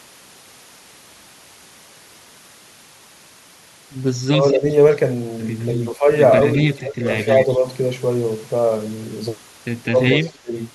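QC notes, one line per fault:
4.28–4.68 s, 5.87–6.09 s, 6.73–7.65 s and 9.91–10.54 s, speech suppressed in double talk: the voice sinks in patches, by about 15, 10, 20 and 20 dB at the deepest. The likely cause is both ends talking at once, so the echo canceller, unable to tell the local talker from loudspeaker echo, pulls everything down until the overlap clears.
4.41–4.52 s, 5.6–5.74 s, 6.41–7.55 s and 10.24–10.6 s, echo leak: a faint, delayed copy of the voice trails about 205 ms behind, at about -20, -25, -15 and -15 dB relative to the speech, brief scraps early on and a sustained stretch around 6.4–7.5 s. The likely cause is a loudspeaker at the far end whose canceller let part of the microphone pickup through, returning the audio one round trip later.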